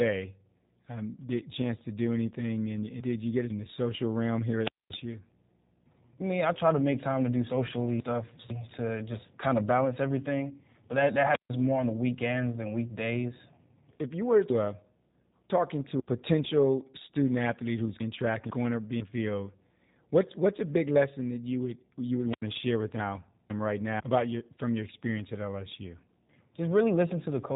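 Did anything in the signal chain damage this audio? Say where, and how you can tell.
Yes. Throughout the clip the speech has passed through a G.729 codec, most likely the G.729A variant, at 8 kbit/s. Nothing reaches above 3.8 kHz, and the voice sounds plainly rough and faintly synthetic. A simple low-pass filter or telephone band limit would only dull the sound. This roughness comes from rebuilding each 10 ms frame from a vocal tract model, a pitch predictor and a few sparse pulses, which is what marks it as a low-rate speech codec.

At four places the order of the audio is scrambled, a fault of chunks out of order at the buffer or network stage. From 1.5 to 3.5 s, just before "the social realm", a 500 ms chunk plays three chunks late. Single 500 ms chunks are one chunk late from 7.5 to 8.5 s, from 18.0 to 19.0 s (between "potential student athlete who's" and "field what's what's a"), and from 23.0 to 24.0 s (between "to share with" and "about your from your"). 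Each spot sounds jumbled, with three hard joins. Unlike a dropout or packet loss, no audio is missing and no gap is filled.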